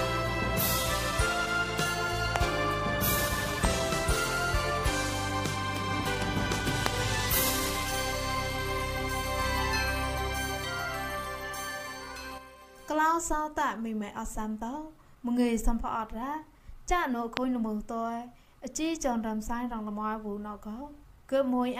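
A sudden voltage spike, likely from a plug, switch, static discharge or driver glitch, enters the signal path and produces four loud pops at 2.36, 3.65, 6.86 and 17.37 s. Each lasts about 20 ms and peaks some 15 to 25 dB above the audio, which continues underneath.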